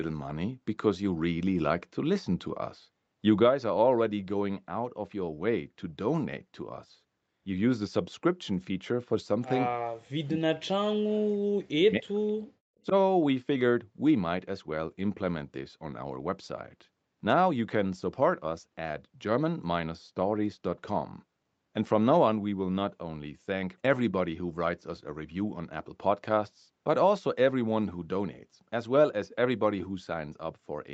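In this speech clip, the talker's level collapses from 9.74 to 12.26 s, dropping by about 40 dB at its deepest and affecting roughly three seconds, with a shorter, shallow dip of about 5 dB at 12.85 to 12.94 s. This is speech suppressed in double talk, likely because the echo canceller treated the talker's sound as loudspeaker echo while the far side was also speaking and turned both down. Right after the first dip, from 12.27 to 12.32 s, a very faint delayed copy of the sound slips through, trailing by 0.27 s. This is an echo leak: the loudspeaker end's canceller likely did not fully remove what its microphone picked up and sent the remnant back.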